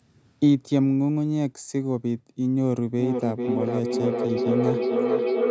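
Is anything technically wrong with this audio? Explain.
Yes. From 2.99 s to the end at 5.5 s there is feedback echo between two devices: the speech returns about every half second, reaching about 0 dB relative to the original. A second device in the room plays the call back into a microphone whose echo canceller only removes its own playback, so repeats pile up rather than fading, unlike ordinary single-device echo.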